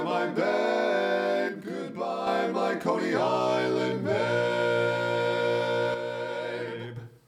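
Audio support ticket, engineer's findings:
One channel drops out, twice: 1.49 to 2.27 s and 5.94 to 6.97 s. Symptom: abrupt level step of about 6 dB down on the shared content, restoring just as abruptly at each end. Anything panned only to the lost side vanishes for the duration. Probable component: one leg of the stereo path, likely an intermittent cable, connector or input channel. Mechanism: with one side gone, the mono sum carries half the common signal.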